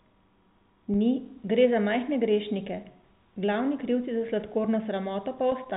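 Nothing faulty can be heard anywhere in this speech.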